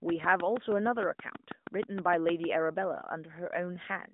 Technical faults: train of clicks

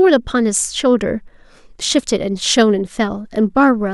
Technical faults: none

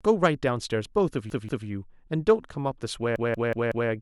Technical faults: repeated buffer

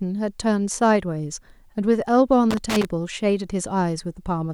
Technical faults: loose connector crackle

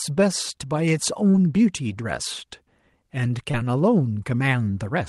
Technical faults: short concealed packet loss

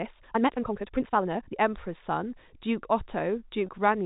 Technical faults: time-stretched section; packet loss with pitch repetition

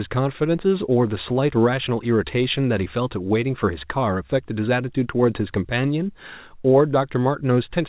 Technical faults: none

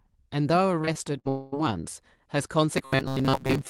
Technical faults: repeated packet loss (robotic sound); long network dropout; robotic sound from repeated short buffers

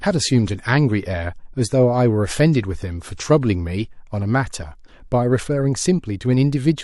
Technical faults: adaptive stream starting at a low bitrate

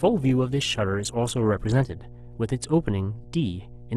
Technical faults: mains hum; adaptive stream starting at a low bitrate

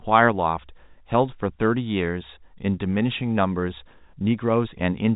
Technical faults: none

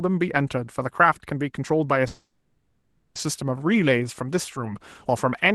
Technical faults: call audio freeze

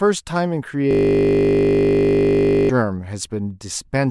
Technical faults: system hang loop

